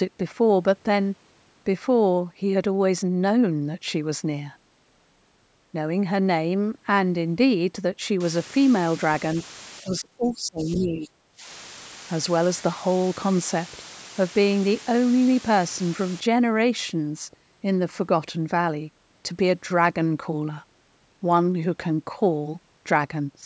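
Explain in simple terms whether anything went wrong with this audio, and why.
From 8.20 to 16.20 s there is low bit depth with dither: a steady, even hiss sits fairly close to the speech, which fits audio stored with only about 6 bits. Between 9.81 and 11.47 s the speech dips sharply for well over a second, likely speech suppressed in double talk, with the echo canceller turning down the talker while the other side spoke.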